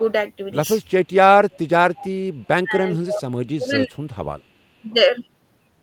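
A far-end echo canceller likely let some loudspeaker pickup through, so an echo leak returns faint delayed copies of the speech, about 424 ms late and well below it, at 1.51–1.59, 1.95–2.06 and 2.44–2.48 s. Then, with both sides talking, the canceller likely mistook the talker for echo, and speech is suppressed in double talk from 2.63 to 3.98 s and briefly at 4.81–4.87 s, dipping by roughly 25 dB and then 15 dB.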